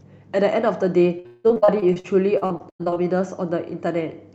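From 1.19 to 2.98 s the speech turns choppy and robotic, with missing pieces. This is repeated packet loss: holes up to 178 ms recur, each patched by stretching the last sound, so concealment covers about 38% of that stretch.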